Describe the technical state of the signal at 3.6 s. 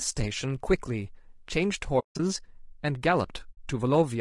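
AAC frame loss with muting ends just before 3.6 s, having run from 3.51 s to 3.58 s. For about 60 ms the decoder had nothing valid to play and zeroed the spectrum, so the sound drains away and returns through the overlapping transform windows rather than stopping dead. The gap is heard as a soft-edged hole, a span consistent with three consecutive lost frames.

Around and through that moment, the speech carries plainly audible codec damage, likely from low-delay AAC compression such as AAC-ELD, with a grain that suggests a bitrate near 32 kbps. At this low bitrate too few bits remain to code the spectrum finely, so noise fills the spaces between the pitch harmonics and the voice sounds rough and grainy. The upper band sounds dulled or synthetic rather than natural.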